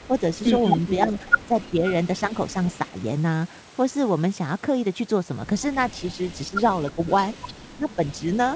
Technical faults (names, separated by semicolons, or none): echo leak; speech suppressed in double talk